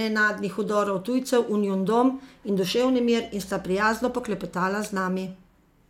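Nothing in the speech reveals a technical fault at any point.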